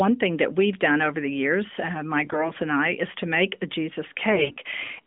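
At 2.24 to 2.51 s, between "the years uh my" and "and I is to", AMR bit errors hit hard. Flipped low-priority bits misplace the codec's excitation pulses, so pitch holds but the voice turns scratchy and gargly. A milder patch follows at 4.32 to 4.55 s.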